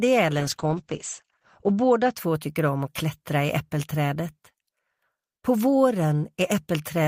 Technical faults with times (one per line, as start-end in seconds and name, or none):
0.40-2.21 call bitrate drop